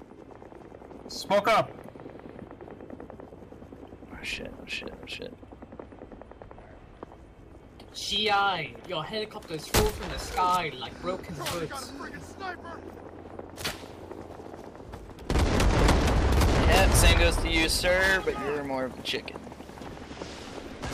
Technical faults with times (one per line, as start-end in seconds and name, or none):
none